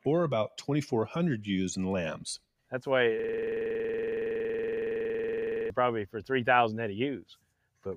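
From 3.19 to 5.70 s, a system hang loop repeats one 46.44 ms slice at 21.5 Hz, a rattling buzz that fits a 2048-sample ring buffer replayed while the system stalled. Between 7.22 and 7.53 s, sound cut by the noise suppressor drops about 12 dB for roughly 150 ms, so the sound sinks as it is treated as noise.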